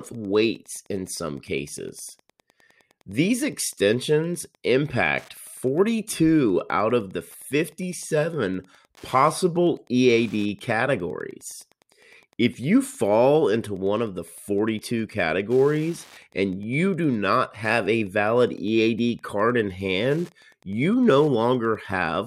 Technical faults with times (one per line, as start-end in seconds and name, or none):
0.00-22.26 Wi-Fi interference